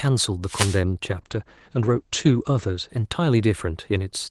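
Right near the start, from about 0.45 to 0.82 s, there's a wireless microphone noise hit: a quick swish of static over the speech. That's the analogue FM radio link fading as reflected copies of the signal cancel each other. With the carrier that weak, the receiver's own hiss comes up and briefly masks the voice until the signal recovers.

Then from 1.1 s to about 3.45 s there's a call bitrate drop. The call's bandwidth estimate fell and the Opus encoder was pushed from a level that sounds like around 32 kbps down to something like 12 kbps. The top end narrows from 12 kHz to 8 kHz, so the speech goes muffled and a bit rough and watery from the coarser coding. It sits at its worst for about 1.3 s before climbing back. Before and after the dip, the call path's usual 12 kHz Opus band is what you hear.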